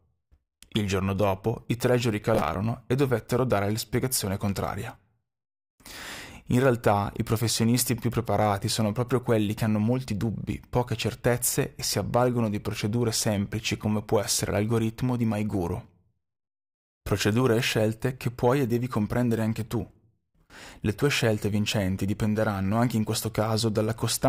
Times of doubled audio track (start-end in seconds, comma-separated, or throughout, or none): none